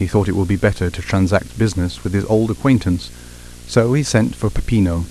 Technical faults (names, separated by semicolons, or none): video or display buzz